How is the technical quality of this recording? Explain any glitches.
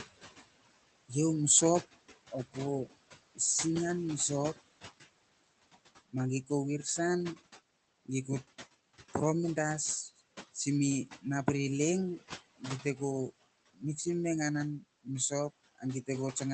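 The recording has one audible fault, noise suppressor artifacts, present for the whole clip. The room noise sits about 16 dB below the speech, and the spectrogram's upper edge stops near 8 kHz, consistent with the call codec's bandwidth limit.

Noise suppressor artifacts, throughout: the suppressor treats the steady room noise as unwanted and pulls those bands down by about 18 dB in pauses, easing off under speech. The noise therefore pumps in and out. A spectrogram shows the gaps between phrases going dark. A waveform shows the noise floor dropping between phrases and rising under the speech.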